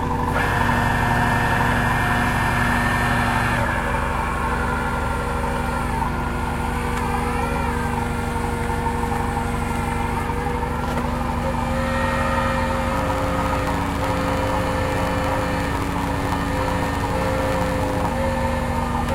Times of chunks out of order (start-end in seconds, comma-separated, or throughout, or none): none